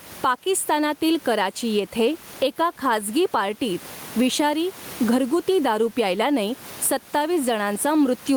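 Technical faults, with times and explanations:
Throughout, gain pumping: a gain swing of around 15 dB, with the room noise about 30 dB below the speech. This is likely input gain set far too high, with a fast limiter clamping each peak and squashing the dynamics.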